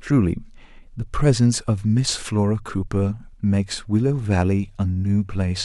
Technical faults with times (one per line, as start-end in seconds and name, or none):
none